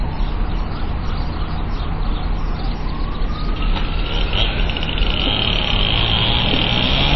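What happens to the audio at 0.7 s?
At 0.7 s the everyday sound carries MP3 compression artefacts, present for the whole clip. Nothing survives above 5.8 kHz, and the swirly, watery texture fits a starved bitrate near 24 kbps, likely from an encoder zeroing weak lines. A spectrogram shows a hard ceiling with flickering gaps below.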